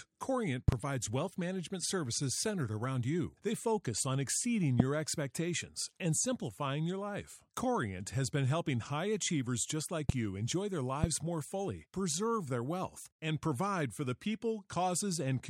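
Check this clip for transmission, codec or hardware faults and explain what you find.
Four loud pops are present. A double pop sits at 0.68 to 0.75 s. Single pops follow at 4.80 to 4.82 s, 10.09 to 10.12 s and 11.04 to 11.06 s. Each peaks roughly 20 dB over the speech, which carries on underneath. The likely cause is a sudden voltage spike, such as static or a switch.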